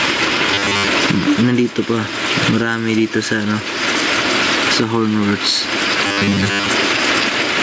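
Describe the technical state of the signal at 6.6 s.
At 6.6 s you're inside a stretch of robotic sound from repeated short buffers, running from 6.07 to 6.70 s. New audio likely arrived too seldom, so short slices, about 10 ms long, kept getting replayed in place of most of the real signal. That stamps a rigid, metallic 100 Hz buzz over the sound.

Gain pumping is there too and runs through the whole clip. The gain is likely set far too high, with a fast limiter clamping down on loud moments. The level swings by roughly 20 dB, so everything sounds squashed.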